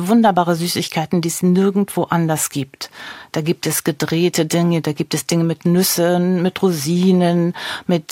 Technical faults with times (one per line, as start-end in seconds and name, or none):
none